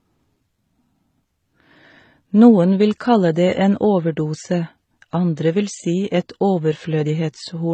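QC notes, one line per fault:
Throughout: transcoding between lossy codecs, likely a low-rate MP3 pass of around 32 kbit/s re-encoded as HE-AAC near 20 kbit/s. The second stage spends bits on the first stage's artefacts and adds its own, leaving dull speech with both sets of artefacts heard together and nothing above 9 kHz.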